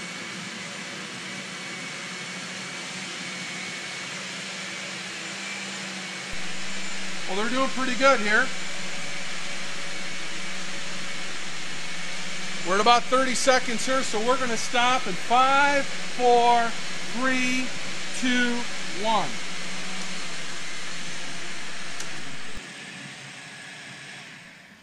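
At 6.33 s a DC step occurs: the waveform's zero line jumps by about −26 dBFS and holds there until 22.57 s, when it returns. Each transition is heard as a low thump or click, while the sound itself carries on unchanged.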